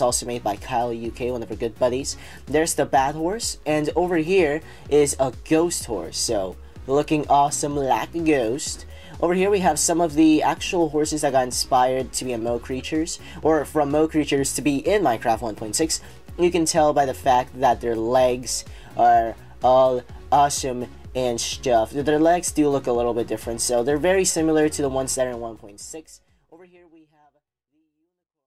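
No technical faults are audible.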